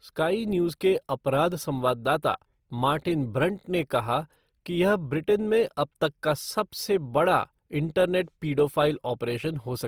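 Throughout, the speech sounds grainy and rough, with noise-filled upper bands reaching 20.2 kHz; likely Opus compression in music mode, fitting a bitrate near 24 kbps.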